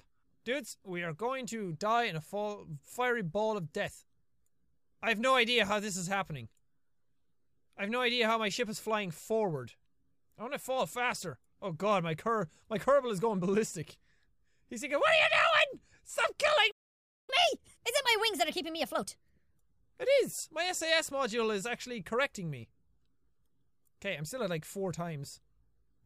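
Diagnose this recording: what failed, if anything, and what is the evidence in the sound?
Playback stall, 16.71 to 17.30 s: the sound stops in mid-flow and the output goes silent for about 0.57 s, then resumes. This is a playback-stage failure, likely the player running out of buffered data or its audio thread being blocked, so nothing reached the output until the buffer refilled and the stream picked up again.

Catch-up at higher speed, 17.30 to 19.58 s: right after the gap, the audio runs at 1.25 times normal speed, with pitch raised by roughly four semitones, before settling back. Also at the playback stage, the player resamples its backlog to recover the time lost in the stall. Speed and pitch rise together because the material is simply played faster, not time-stretched.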